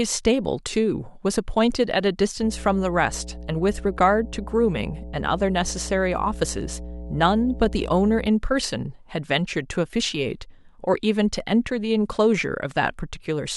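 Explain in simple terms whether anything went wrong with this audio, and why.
Mains hum runs from 2.42 to 8.27 seconds: a steady low 60 Hz buzz, fairly loud under the speech, leaking in from the electrical power line.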